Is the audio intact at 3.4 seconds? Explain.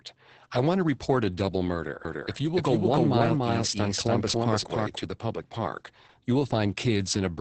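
No. From 2.05 to 4.97 s there is a doubled audio track, most likely because the audio is being captured a second time by a slower path. A second full-band copy trails the original by roughly a third of a second at about the same level. It starts and stops abruptly, with no decay or room colour, so each sound is heard twice in close succession.

Throughout the clip, including this moment, Opus voice compression runs in its SILK speech mode with heavy damage, which fits a bitrate around 10 kbps. The band is narrowed to wideband, so nothing above 8 kHz survives, and the excitation is coded coarsely. The speech sounds muffled, hoarse and slightly robotic.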